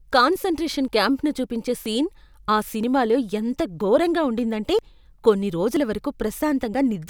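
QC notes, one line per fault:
0.88–6.74 s, audio missing between chunks: short skips at 0.88, 1.86, 2.83, 3.81, 4.79, 5.77 and 6.74 s, recurring about once a second. At each, a sliver of speech of roughly 20 ms drops out and the sound on either side butts together with no gap, giving a small jump in the speech. The regular spacing points to a likely cause of a recorder or processor handling the signal in 1 s chunks and losing a fragment at each chunk handover.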